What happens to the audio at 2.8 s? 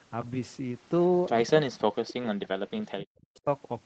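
Speech suppressed in double talk spans 1.17 to 3.46 s. The speech dips or breaks up, roughly 40 dB at worst, likely as the echo canceller turns it down along with the echo, following the overlap rather than random gaps.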